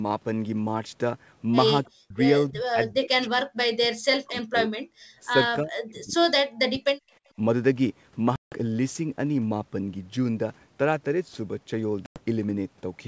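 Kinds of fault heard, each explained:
Speech suppressed in double talk: the speech drops by roughly 40 dB or breaks into patches from 1.85 to 2.17 s, 2.5 to 4.97 s and 5.62 to 7.03 s. This is likely an echo canceller ducking the near talker. The waveform envelope collapses in chunks, and the spectrogram thins and gaps.
Packet loss on an ADPCM call: 160 ms of audio vanishes at 8.36 s and 100 ms at 12.06 s, and the decoder's predictor and step size lose step with the sender's. The waveform shows flat, hard-edged silences, and the spectrogram shows blank vertical bands, with the speech slightly distorted as sound resumes.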